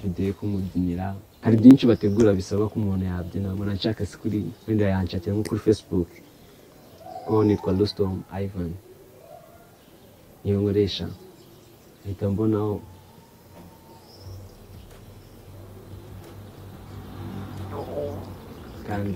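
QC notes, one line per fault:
1.58–3.82 s: periodic USB or driver dropouts. Regular ticks every 0.124 s, around twenty in all, each where well under a millisecond of audio is skipped outright. The splice creates a small waveform discontinuity, so each gap is heard as a click while signal is present.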